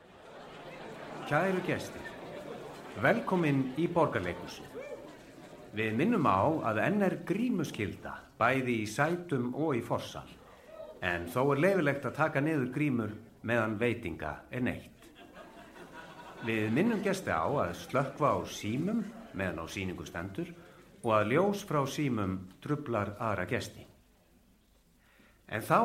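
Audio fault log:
No fault can be heard anywhere in the clip. Nothing in the audio calls for an entry in this log.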